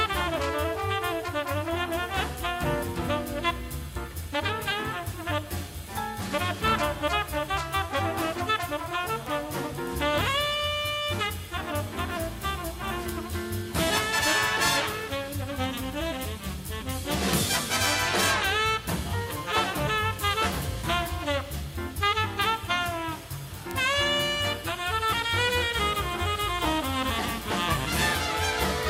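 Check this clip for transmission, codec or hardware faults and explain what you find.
There's one fault here: word clock ticks running from 0.34 s through to 28.8 s. Ticks repeat roughly every 0.4 s, around seventy of them, because the receiving device isn't locked to the sender's clock. An offset of about 50 ppm sets how often the clocks slip, and each slip drops or repeats one sample.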